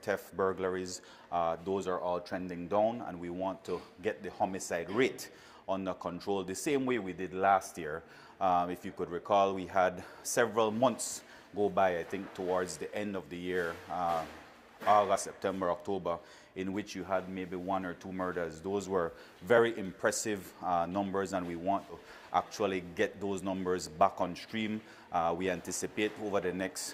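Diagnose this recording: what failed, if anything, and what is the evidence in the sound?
Three brief jumps where the sound lurches forward: at 15.15–15.18 s, at 19.57 s, and at 21.89–21.96 s. This is compressed frames skipped, at the codec or decode stage. Whole 20 ms frames never reached the output, either missing from the file or rejected as damaged by the decoder. The first two jumps drop about one frame (around 20 ms); the last drops several frames (around 70 ms).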